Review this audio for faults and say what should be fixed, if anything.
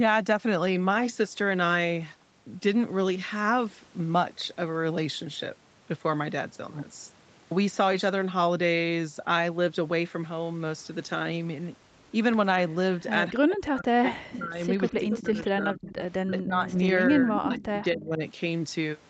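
Echo leak at 12.71–13.02 s, 14.31–15.21 s, 15.91–16.02 s and 17.38–17.85 s: a delayed copy of the speech arrives about 0.25 s late. It ranges from barely audible to around 10 dB below the speech, likely from residual loudspeaker pickup that the far end's echo canceller missed. On a spectrogram, a weaker duplicate of the harmonic pattern trails the original by about a quarter second. Better acoustic isolation or a properly converged echo canceller at the loudspeaker end would prevent it.

Speech suppressed in double talk between 13.32 and 18.23 s: the speech dips in pieces totalling about 3 s, at worst by roughly 40 dB. This is likely the echo canceller clamping down while both sides talk at once. The waveform shows abrupt notches in the envelope, and the spectrogram shows gaps or thinned energy. A canceller with better double-talk detection would prevent it.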